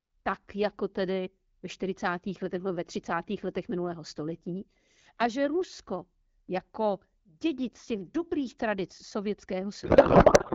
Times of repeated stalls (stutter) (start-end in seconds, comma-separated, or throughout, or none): none